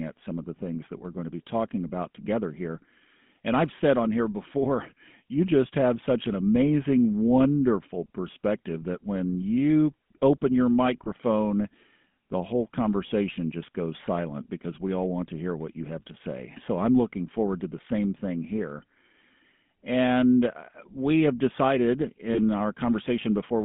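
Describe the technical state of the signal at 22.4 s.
Right around 22.4 s you're just coming out of a short burst of lost GSM frames, running from 22.34 to 22.39 s, straight after "uh we have decided". When the decoder got bad frames it simply reused the last good frame's settings, so for about 40 ms the sound hangs as a rough, metallic ring before normal decoding picks back up. That length fits two 20 ms frames going missing.

Underneath that, the GSM full-rate codec is present for the whole clip and its damage is plainly audible. It models the vocal tract and drives it with a sparse, evenly spaced pulse excitation, which gives the speech that buzzy, gravelly grain. The line band runs from about 150 Hz to 3.5 kHz, so the top end is gone, and the overall character fits the 13 kbps full-rate codec.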